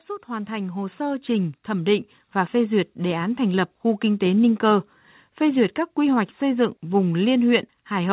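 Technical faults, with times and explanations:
0.25 to 4.12 s, automatic gain rising: the gain control judged the input too quiet and ramped its gain up by about 10 dB over nearly four seconds, so the speech and the background noise swell together, heard through a telephone-band path with nothing above 4 kHz.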